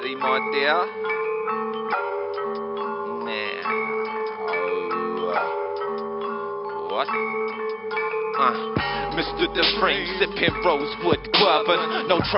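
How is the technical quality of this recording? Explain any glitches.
Nothing glitchy turns up anywhere in the recording, so there's nothing here to explain.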